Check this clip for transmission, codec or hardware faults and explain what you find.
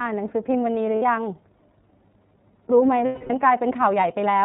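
The speech has two faults: narrowband iLBC coding throughout, and two dropouts from lost iLBC frames.

Throughout the clip, the iLBC codec removes everything above 4 kHz and codes each frame's excitation on its own. This gives a slightly rough, synthetic edge. The sound fits iLBC's 13.33 kbps, 30 ms mode. Unlike the smeary artefacts of AMR or G.729, there is no warbling carry-over between frames.

Lost iLBC frames at 0.96 to 1.02 s (60 ms) and 3.05 to 3.31 s (240 ms) are concealed by repeating the last pitch cycle mixed with noise. Each sounds like a held, buzzy vowel, and the longer one fades. The voice recovers instantly afterwards, unlike a codec that needs several frames to resync.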